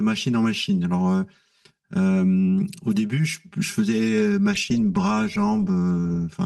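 From the start, channel delay (comb filtering) gives the speech a hollow, phasey tone. One channel runs about 5 ms late, so summing cancels near 100 Hz and regularly upward, showing as evenly spaced horizontal notch stripes on a spectrogram.

At 4.55 s a call bitrate drop sets in and lasts the final 1.9 seconds. The coding turns rough and watery, consistent with a fall from 32 to 18 kbps, and the spectrogram's detail coarsens and smears.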